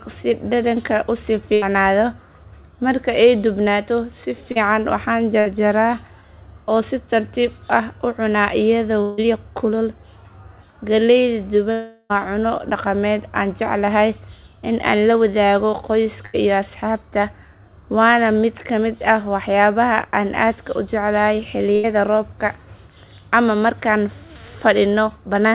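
A speech recording carried over a narrowband call line, with everything above 4 kHz gone in the way a G.711 mu-law path at 64 kbps would leave it, and broken by several gaps. Four times the sound stalls into a held buzz or a fading hiss for a little under a tenth of a second before jumping ahead. This happens at 1.54 s right after "u sii", and again at 5.40 s, 16.26 s and 21.76 s. These are bursts of packet loss: runs of packets, about 60 to 80 ms of audio each time, either failed to arrive or arrived too late. The receiver stretched the last sound and faded it down, then resumed past the missing stretch. At 4.52 s, just after "ay dubnaato si", there is a much briefer smear. This is a short concealed packet loss: about 40 ms never reached the decoder in time, and the gap was patched by continuing the preceding sound and blending it back into the real audio. Two longer breaks follow. At 9.02 s, after "u cunaa", a fading buzz or hiss trails on for about 0.16 s. 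At 11.72 s a fading tail lasts about 0.38 s and ends in a brief moment of silence. Both are long network dropouts, where nothing arrived for a sustained stretch. They were likely caused by a network stall, and the audio picks up again without the lost portion.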